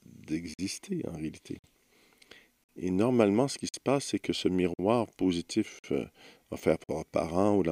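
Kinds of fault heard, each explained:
Gap between chunks: the audio plays in 1-second blocks with 50 ms of silence inserted at each join, from padding or each block starting late. No sound is lost, but seven evenly spaced holes break it up, from 0.54 s to 6.84 s.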